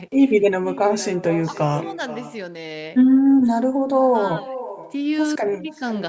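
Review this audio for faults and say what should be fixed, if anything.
Echo with no canceller runs throughout. The far end's loudspeaker feeds its microphone, returning the speech about half a second later, about 16 dB quieter. Enable acoustic echo cancellation at the far end, or have that side use a headset.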